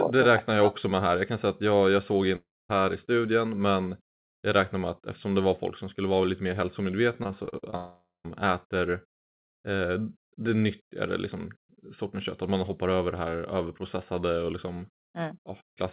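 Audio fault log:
2.36–2.71 s, long network dropout: after "att jag jag såg" the sound smears into a fading buzz, then about 240 ms of silence, and returns at "i studien men jag" with roughly 340 ms gone. One continuous hole, likely from a stalled stream, not repeated short breaks.
7.23–7.74 s, repeated packet loss (robotic sound): six short gaps, the longest 42 ms, each patched by repeating the last sound. About 28% of this stretch is concealed, giving a choppy texture. The breaks recur, unlike a single long dropout that fades to silence.
7.76–8.28 s, long network dropout: right after the choppy run, about 480 ms of audio is lost. The concealment buzz dies away into roughly 150 ms of silence before the band-limited call audio, with nothing above 4 kHz, resumes. The cause is likely a network stall.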